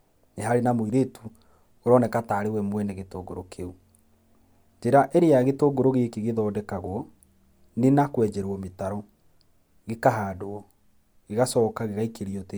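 Listening through this speech recording, nothing stood out as a technical fault at any point.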